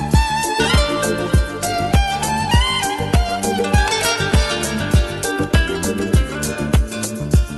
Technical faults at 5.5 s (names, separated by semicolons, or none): none